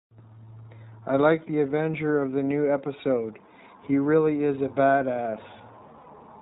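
The iLBC codec affects the whole speech clip. Its narrowband coding removes everything above 4 kHz and leaves the speech plainly rough and slightly synthetic. This fits the 15.2 kbps, 20 ms frame mode, where each frame's excitation is coded independently.

Lost iLBC frames occur at 2.20 s, from 4.04 to 4.06 s, and from 6.02 to 6.08 s, where about 40 ms is missing. At each gap, the decoder repeated the last pitch cycle mixed with noise, so it sounds like a brief held, buzzy vowel before the normal voice returns.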